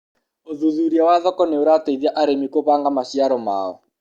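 No technical faults can be heard anywhere in the speech signal.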